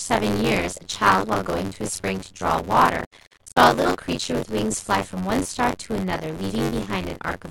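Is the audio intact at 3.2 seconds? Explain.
No. From 2.97 to 3.57 s, AAC frame loss with muting leaves soft-edged holes. The decoder zeroed the lost frames, so the overlapping windows fade the speech out and back in. About 448 ms is missing across that span, and the longest gap runs roughly a tenth of a second. Buffer tearing is present at 3.2 s too. It adds a robotic buzz near 93.8 Hz, which fits a 512-sample buffer. Part of each buffer, roughly a third, repeats audio about 30 ms old.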